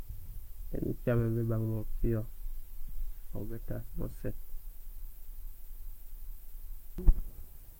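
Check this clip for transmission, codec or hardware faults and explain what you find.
One fault turns up in this speech clip: a broken-record loop from 5.15 s to 6.98 s. A fragment about 0.42 s long plays four times back to back, identical each time, and the audio that should have filled that stretch never arrives. The likely cause is a player, encoder or stream that stalled and kept resending the last piece it held. On a waveform, the same envelope shape repeats at exact 0.42 s intervals. On a spectrogram, the same block of patterns appears four times in a row.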